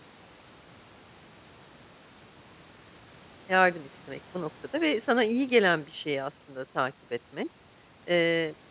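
Nothing's wrong with this speech recording: there's a low room noise sitting about 30 dB under the talking, and the call path trims everything above 4 kHz, which fits a G.711 mu-law call codec working as it should.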